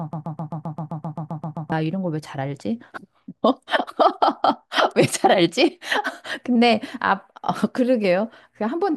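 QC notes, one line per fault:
0.0–1.72 s, broken-record loop: a 131 ms fragment of speech, already repeating when the clip opens, plays back to back about 12 times, likely from a stalled player or stream resending its last buffer. The speech meant for that stretch is lost. A spectrogram and waveform show an identical block tiled at exact 131 ms intervals.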